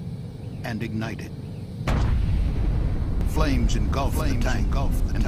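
The audio shows a doubled audio track from 3.21 s to the end: a full-band copy trails by about 0.7 s, about 5 dB quieter. It is likely from a slower second capture path or misaligned edit. Unlike echo or reverb, the copy starts abruptly, with no decay or room colour.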